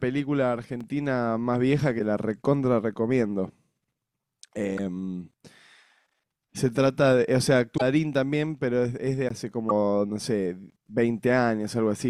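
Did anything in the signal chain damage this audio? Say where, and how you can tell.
Yes. There is a block of digital silence at 0.81 s and another at 9.29 s. This damage is at the driver or buffer stage. The speech drops straight to silence and returns with no fade. The first gap lasts about 5.3 ms, which fits a single 256-sample buffer that was not filled in time. The second lasts about 17.6 ms and is heard as a short hole rather than a tick.

Damaged data in a compressed stream is at the codec, storage or stream stage. It occurs at 1.98–2.01 s, 4.74–4.79 s, 7.74–7.82 s and 9.66–9.71 s. Each is a brief fault lasting roughly 25 to 75 ms. Corrupted bytes made the decoder misread those frames, lose sync and search for the next valid frame header. The disturbance left during that search is what you hear.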